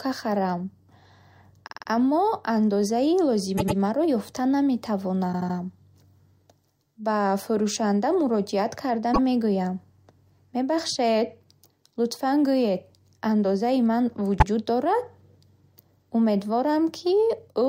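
Repeated frames occur at 1.66 s, 3.57 s, 5.32 s, 9.13 s and 14.38 s. Blocks of compressed speech 52 to 105 ms long replay one to four extra times, so the speech stutters and each spot stretches by 52 to 235 ms. The first stutter comes just before "аммо андозаи", the fourth just after "фурӯшанда муроҷиат карда", and the last just after "лутфан гӯед андозаи ман".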